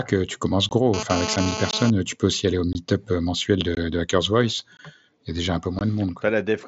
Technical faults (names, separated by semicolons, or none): gap between chunks; GSM phone buzz